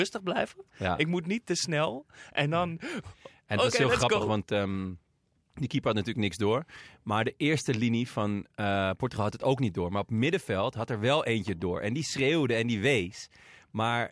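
Nothing is technically wrong with this speech recording.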